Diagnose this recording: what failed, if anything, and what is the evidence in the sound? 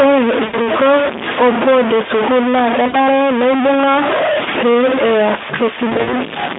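A stuck bit, likely in the converter or sample-format path, gives grainy or buzzy distortion throughout. Unlike codec roughness, it also fills the pauses with noise, since a stuck bit persists when nothing is being said.

VoIP packet loss concealed by the speech codec appears at 0.43–0.69 s (about 100 ms lost), at 2.87–2.95 s just after "board e school naa" (60 ms), and at 5.89–6.16 s (120 ms, scattered over 240 ms, runs up to 40 ms). Network losses were bridged by the decoder, which stretched the sound into a fading buzzy tone or coloured noise. That fade and the weak recovery set these apart from clean dropouts. The narrow 200–3600 Hz Speex band is heard throughout.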